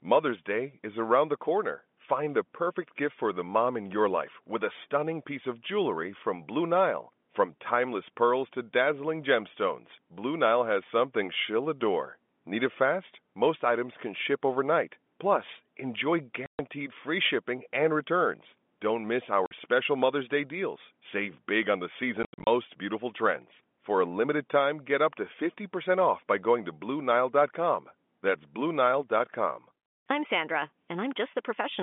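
At 16.46 s the speech drops out for 130 ms, ending just before "free shipping and returns". This is packet loss filled with silence. Lost packets were replaced by dead air, and the gap lengths fit 10 ms packets. At 19.46 s a 50 ms hole follows. From 22.23 to 22.47 s, between "big on the" and "beautiful trends", 180 ms goes missing in scattered bits, the longest 80 ms. Each hole starts and stops hard. The narrow telephone band of G.711 coding remains audible throughout.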